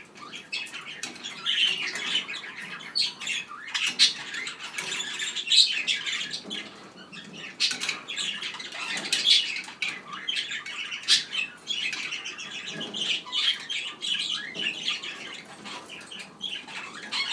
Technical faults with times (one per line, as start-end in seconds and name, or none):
none